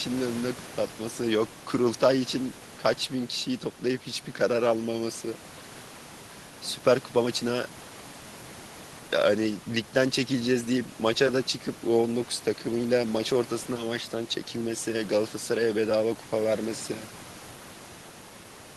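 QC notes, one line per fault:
No faults heard; room noise sits well below the speech.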